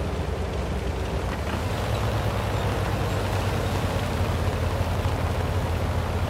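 A train of clicks runs from 1.29 to 5.42 s: around fifty irregularly spaced pops, about 10.7 per second, well above the audio, likely from electrical interference.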